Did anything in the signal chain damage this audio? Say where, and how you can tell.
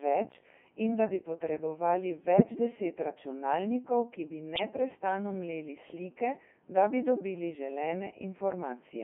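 Yes. The damage is at the codec stage, throughout. The speech sounds robotic and buzzy, confined to about 200 Hz to 3.4 kHz. That is the Codec 2 vocoder, likely at its 3.2 kbit/s mode. It rebuilds the voice from sine waves using only pitch, voicing, energy and envelope. Heavy smearing follows.

There are bit errors on digital voice radio at 2.38 to 2.43 s and 4.56 to 4.63 s. The voice suddenly warbles and jumps in pitch and tone. The first burst fits one corrupted vocoder frame, the second two. A few percent of flipped bits scrambled those frames' parameters.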